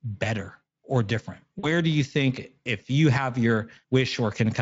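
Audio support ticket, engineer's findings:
VoIP packet loss concealed by the speech codec, 1.59 to 1.68 s, just before "do you think if". Brief stretch of sound decaying into a fading buzzy tone or coloured noise. The gap of about 40 ms fits two lost 20 ms frames. The decoder extrapolated from the last pitch and filter state with falling gain. The onset after the gap is weakened while the decoder state recovers. Likely component: the network path feeding the Speex decoder. Speex coding around 28 kbps gives only light coding damage.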